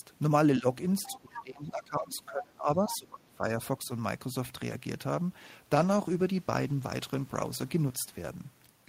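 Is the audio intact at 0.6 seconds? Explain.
No. At 0.6 seconds the speech is caught in a brief speech suppressed in double talk event, from 0.59 to 0.65 s. The level dips by roughly 10 dB. This is likely an echo canceller mistaking overlapping talk for echo and turning the talker down.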